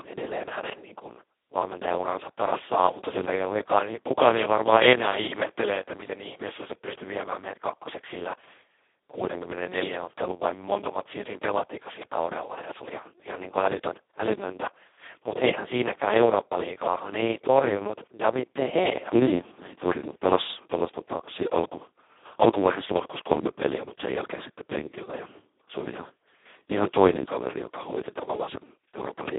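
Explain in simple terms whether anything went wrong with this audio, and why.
The whole clip has been squeezed through the Speex codec at a very low quality setting, so the speech sounds hoarse, buzzy and a bit robotic. It's also boxed into a phone-like band, roughly 250 Hz to 3.5 kHz, so it sounds thin and muffled.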